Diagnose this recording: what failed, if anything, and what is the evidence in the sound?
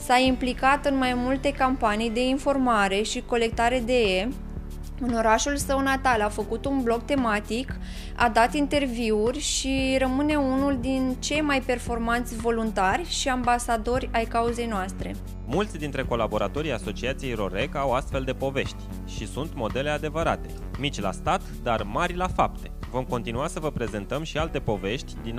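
Nothing here points to a failure at any stage, since every part of the audio sounds just as it should with no event worth flagging.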